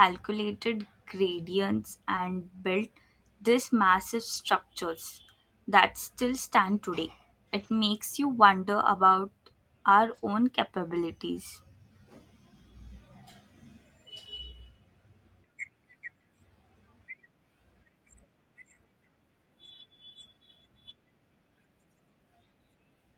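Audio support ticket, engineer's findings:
Short concealed packet loss, 2.15–2.26 s. About 20 ms of audio missing; roughly 10 ms synthesised by the receiver's concealment, extending the preceding sound, then crossfaded back into real signal. Heard as a brief smear or wobble; a short consonant may drop out.

Lost packet rebuilt from error correction, four spots: 2.16–2.18 s; 4.34 s after "built these massive"; 7.60–7.74 s between "that still stand today" and "you wonder about our"; 10.14–10.24 s before "own capabilities". No gaps. The decoder played low-bitrate redundant copies from the following packets (Opus in-band FEC), 20, 20, 80 and 60 ms long, which fits single and separate 20 ms packet losses. Heard as short rougher, noisier stretches.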